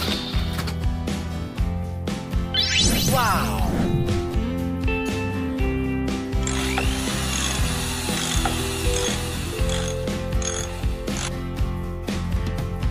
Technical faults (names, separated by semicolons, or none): none